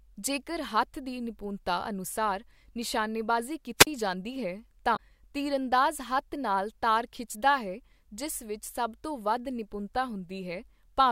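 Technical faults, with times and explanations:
3.78 to 3.87 s, wireless microphone squelch dropout: the radio link from the analogue FM transmitter weakens enough that hiss swells briefly, then the receiver's squelch gate cuts the output to near silence for about 19 ms before the signal recovers and sound resumes. The short mute is the receiver deciding the carrier is too weak to trust, and the hiss before it is the fading FM signal itself.
4.93 to 4.99 s, damaged data in a compressed stream: a short glitch just before "ਤੀਰਅੰਦਾਜ਼ ਹੱਥ ਨਾਲ ਤਾਰ", caused by corrupted bytes in the encoded stream. The decoder cannot read the affected frames properly and loses frame sync, searching for the next valid header.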